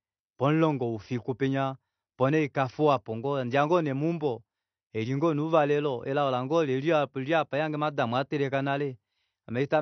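The speech was most likely squeezed through AAC compression at a low bitrate, and the damage runs from start to finish. Short of bits, the encoder discarded everything above about 6.1 kHz, a cut-off low enough to point to a setting near 32 kbps, and quantised the remaining bands coarsely. The speech comes across dull and smeared, with audible codec damage: a warbling, fizzy texture on sibilants and sustained sounds.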